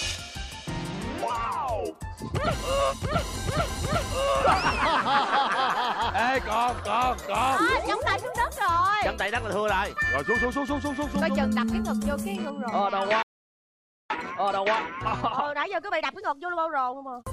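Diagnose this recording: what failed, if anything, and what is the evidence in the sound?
Playback stage stalled: the sound drops out mid-flow from 13.23 to 14.10 s, nearly 0.9 s of silence, likely the player running dry on data.

Then there's a time-compressed catch-up from 14.10 to 17.10 s. The player snips and cross-fades tiny chunks, so it runs 1.25 times fast at normal pitch.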